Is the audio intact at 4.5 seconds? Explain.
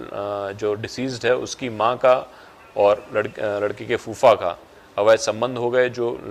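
Yes, at 4.5 seconds the audio is intact, with no dropout, click, distortion or other fault at that moment.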